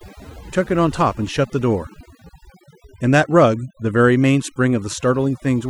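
Throughout the clip, overdone noise removal is at work: a noise reduction stage set far too aggressively cuts individual frequency bands whenever they sit near its noise estimate, taking quiet parts of the speech with them. Pauses drop to near silence sprinkled with twinkling specks.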